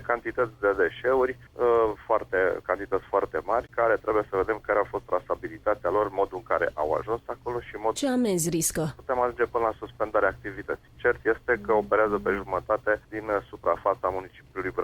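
At about 7.95 to 8.00 s the audio jumps ahead, with a short blip at the join and a sudden change in what you're hearing from one side of it to the other. That sort of discontinuity is most likely a stream segment skipped: one chunk of a segmented stream didn't arrive or didn't load, and the player moved on to the next chunk, so a stretch of material is simply missing at that point.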